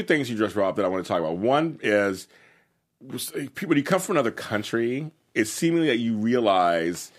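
Speech recording, no technical faults detected anywhere in the clip.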